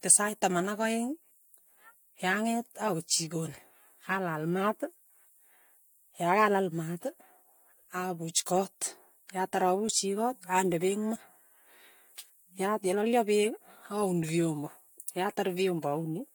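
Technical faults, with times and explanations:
No technical faults detected in the speech recording.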